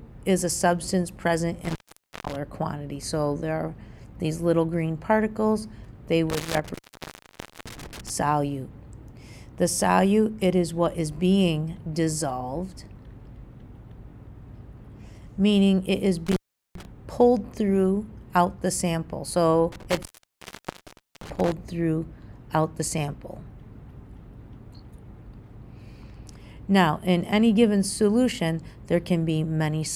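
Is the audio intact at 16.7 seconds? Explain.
No, 16.7 s falls inside an intermittent contact fault running from about 16.27 to 16.85 s. A loose cable or plug briefly opens, so the sound drops out for roughly 390 ms, with crackle at each edge and faint hiss during the gap.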